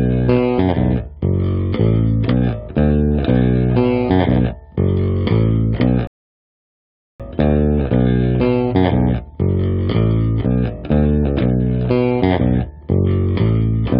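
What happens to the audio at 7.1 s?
At 7.1 s you're sitting inside a rebuffering stall that runs from about 6.07 s to 7.20 s. The player used up the audio it had already downloaded and simply paused until more data showed up, so that stretch is dead silence. When playback picks up again at 7.20 s, it continues from exactly the point where it stopped. Nothing gets skipped; the clip just gains roughly 1.12 s of extra time.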